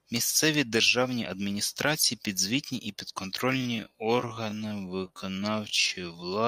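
Time-stretched section from 3.48 s to the end: the speech abruptly slows to about 0.55x speed at unchanged pitch, so it drags, likely from software repeating short pieces to lengthen it.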